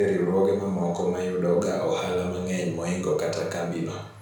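No technical faults occur at any point in the speech, so there is nothing to describe in time order.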